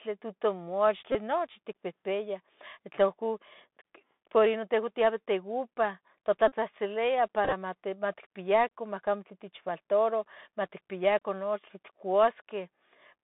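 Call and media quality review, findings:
Bluetooth CVSD headset codec throughout: band roughly 150 Hz to 3.6 kHz, scratchy s sounds, granular hiss underneath. The one-bit 64 kHz step can't keep up.

Bluetooth headset packet repeated: brief buzz near 267 Hz at 1.12–1.15 s (just before "nochi ticpihpiah") and 6.48–6.52 s, plus scattered ticks over 7.45–7.53 s. The chip is replaying the last packet every 3.75 ms.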